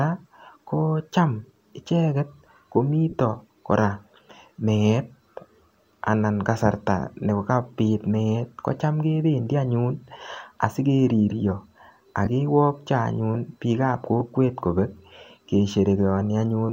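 At 3.09–3.14 s, 12.25 s and 14.20 s, lost LE Audio frames are patched with a sign-scrambled copy of the last spectrum, giving a brief noisy smear instead of a silent dropout.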